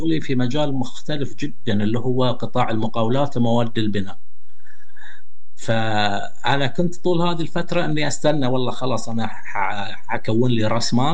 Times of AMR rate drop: none

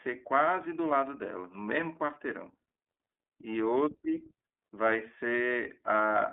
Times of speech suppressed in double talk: none

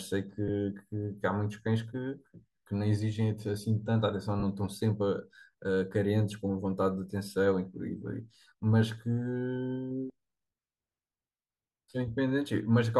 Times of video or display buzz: none

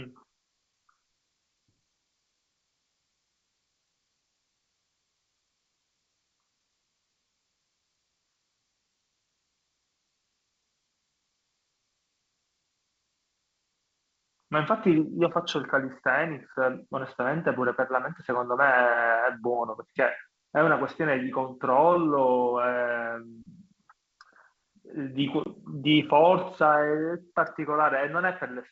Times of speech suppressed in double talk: none

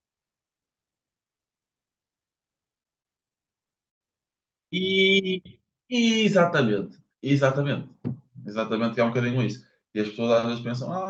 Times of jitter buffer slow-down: 5.21-5.54

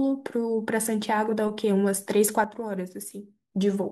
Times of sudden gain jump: 2.44-3.52

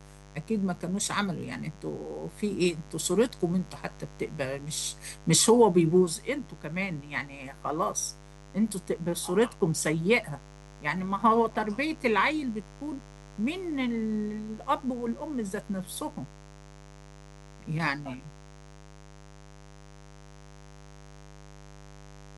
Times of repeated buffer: none

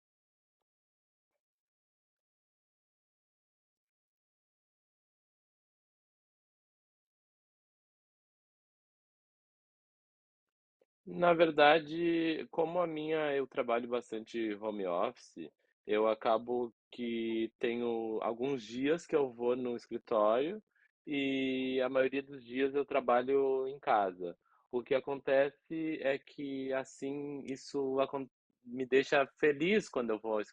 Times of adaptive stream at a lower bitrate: 21.87-25.87

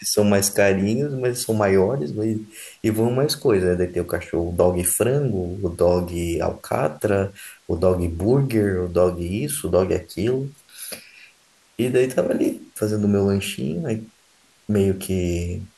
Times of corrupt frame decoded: none

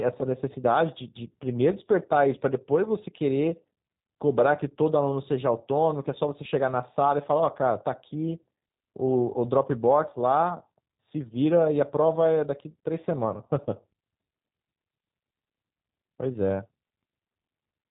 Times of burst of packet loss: none

